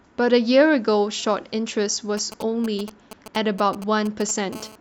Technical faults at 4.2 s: GSM signalling bursts

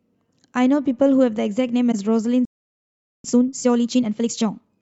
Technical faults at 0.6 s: none

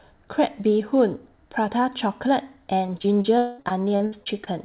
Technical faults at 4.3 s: repeated packet loss (robotic sound)

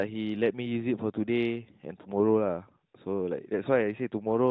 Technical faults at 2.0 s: lost AMR speech frames

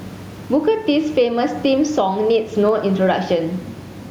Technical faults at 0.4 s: gain pumping

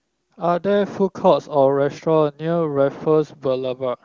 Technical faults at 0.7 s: none

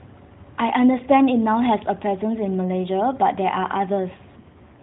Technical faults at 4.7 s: AMR rate drop

